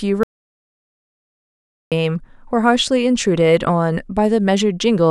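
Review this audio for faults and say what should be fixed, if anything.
An audio dropout to silence runs from 0.23 s to 1.92 s, removing about 1.68 s of speech. The signal falls to silence with no room tone, likely from a lost input link or mute while recording continued. Secure input connections and monitor levels during capture.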